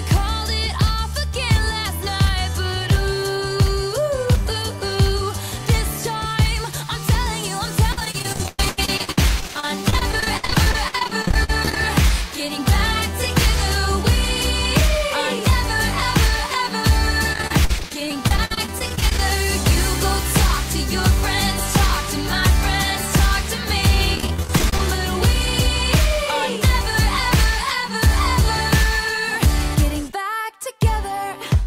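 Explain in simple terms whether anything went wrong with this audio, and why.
Yes: repeated packet loss (robotic sound) occurs at 7.92–11.77 s, 17.33–19.19 s and 24.15–24.80 s. Short pieces of audio went missing, the longest about 106 ms, and each hole was patched by stretching the previous sound, giving a choppy effect.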